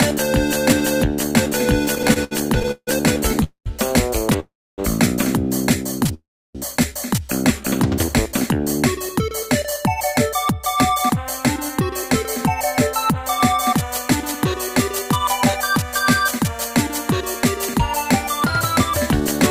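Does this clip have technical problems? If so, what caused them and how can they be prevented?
Yes, there are three kinds of trouble here, all on the receiving end of a network call.

First, repeated stalls (stutter) between 1.85 and 6.10 s. The packets kept showing up late, so the jitter buffer ran dry over and over, about fifteen times. Each time the receiver stretched out the last bit of sound until more arrived. The longest hold is 156 ms, and together they add roughly 0.39 s of filler with nothing actually lost, so the audio drags and hiccups rather than dropping out. Prevention: give the jitter buffer more headroom on an unsteady link, or fix the path that's adding the jitter.

Second, three longer call audio freezes at 3.44–3.68 s, 4.40–4.80 s and 6.14–6.57 s. In each one the sound hangs as a fading continuation and then drops to silence: about 0.1 s, 0.28 s and 0.32 s of quiet. Playback then picks up exactly where it left off, pushed later by 0.22 s, 0.38 s and 0.41 s respectively. 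The likely cause is packets held up in transit long enough to empty the buffer completely. Prevention: prioritise the call traffic (QoS) and avoid congested or flaky Wi-Fi hops.

Third, a jitter buffer speed-up from 9.99 to 19.38 s. The buffer was sitting on more audio than it wanted, so the receiver kept trimming tiny pitch-period-sized slices to catch up. The result is playback at about 102% speed with unchanged pitch, shedding around a fifth of a second overall. Prevention: smoother delivery upstream means the buffer never overfills and has no backlog to burn off.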